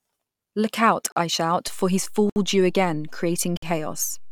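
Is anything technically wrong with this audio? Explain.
Yes. The speech is interrupted three times by a block of digital silence, and a DC step shifts its baseline partway through.

The blocks of digital silence fall at 1.12 to 1.16 s (40 ms, just before "I shout"), 2.30 to 2.36 s (64 ms) and 3.57 to 3.62 s (54 ms). Each time, the signal drops to silence with no fade and returns just as abruptly, likely because the output buffer was left holding zeros. That gives a short hole. A fade or a muffled gap would point to something else, not to an empty buffer.

The DC step comes at 1.67 s, right after "out I shout". The waveform's zero line jumps to a new offset and holds there until the clip ends. This is heard as a single low thump or click, while the speech carries on unchanged in tone and level. A plosive or a handling bump would settle back within a moment, but this offset never returns, and that persistence is what marks it as a DC step.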